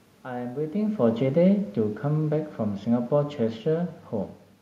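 Speech with some room noise underneath, and the one real problem is automatic gain falling: from 0.7 s to 3.97 s the level sags by about 4 dB, and the background sinks right along with the voice. That shared drop tells you it's the gain control backing off after judging the input too hot or too noisy, not the talker. There's a genuine shift in the talker's distance around half a second in, but that's just movement at the mic.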